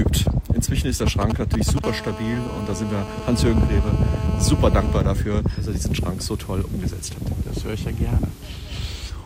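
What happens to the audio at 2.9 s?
A hard, raspy buzz with a dense stack of harmonics sits under the sound, steady from 1.84 s to 4.98 s at about 12 dB below the signal. This is GSM phone buzz: a nearby handset on a call transmits in bursts 216.7 times a second, and the audio circuitry rectifies those radio pulses into an audible tone.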